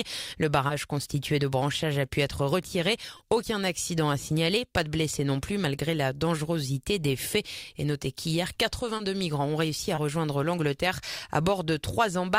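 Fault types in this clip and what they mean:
short concealed packet loss: Four 20 ms stretches of audio never reached the decoder in time, and the receiver filled each gap by extending the preceding sound before blending back into the real signal, leaving brief smears at 0.67, 3.17, 8.97 and 9.95 s.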